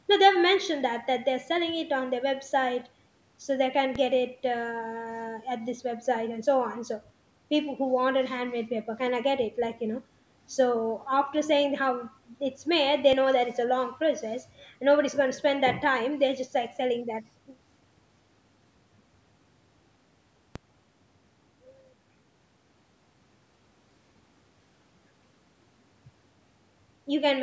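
At 3.95 s the speech's zero line jumps to a new offset, a DC step heard as a low thump, and the waveform rides shifted until 13.13 s, where the offset ends. A second DC step at 20.56 s holds to the end. On the waveform each span sits off-centre; a spectrogram shows vertical broadband smears at the step edges, below the 8 kHz ceiling of the call microphone processing.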